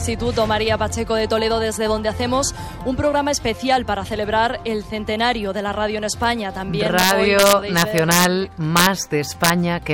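Integer overflow appears from 6.99 to 8.25 s, then again at 8.77 to 8.86 s and 9.44 to 9.50 s. Peaks pushed about 1 to 2 dB past full scale wrap to the opposite sign instead of being limited, producing violent cracks harsher than ordinary clipping.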